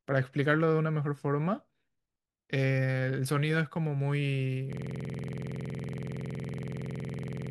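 Speech clip with a system hang loop from 4.73 s to the end: a 46.44 ms fragment repeats about 60 times at 21.5 Hz, which fits a frozen 2048-sample ring buffer.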